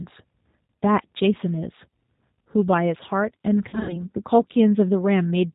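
From start to end, the speech carries G.729 codec damage, and it is plainly audible. The sound fits an 8 kbit/s G.729A stream. This codec does not send the waveform. It sends a vocal tract filter, a pitch predictor and a few pulses per frame, and the decoder rebuilds the speech from these. Nothing above 4 kHz survives. The result is dull and band-limited, with a rough, slightly synthetic edge throughout.

From 3.69 to 4.00 s there is VoIP packet loss concealed by the speech codec. About 140 ms of audio went missing, scattered across roughly 200 ms. The longest gap lasts 60 ms. The decoder filled each gap by repeating its last pitch and filter at falling gain. The sound there is stretched into a buzzy tone or coloured noise, then fades. Because each frame builds on the one before, it stays weak or distorted for a moment after the packets return.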